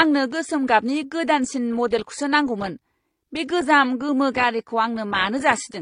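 Throughout the speech, nothing is present above 10.1 kHz, and two kinds of artefact sit together: smeared, swirly coding noise alongside a synthetic, buzzy top end. This points to transcoding between lossy codecs, likely low-bitrate AAC re-encoded as HE-AAC, rather than a single codec's uniform degradation.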